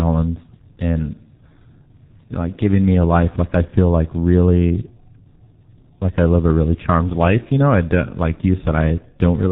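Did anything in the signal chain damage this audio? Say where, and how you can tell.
Yes, at the codec stage: this speech went through G.723.1 with heavy damage, and it lasts the whole clip. Nothing survives above 4 kHz, the voice is hoarse and muffled, and consonants smear together, which fits a rate near 6 kbit/s. A simple low-pass filter would dull the top but keep consonants crisp. The blurring here comes from a slowly updated voice model spread over 30 ms frames, so fast transitions get averaged away.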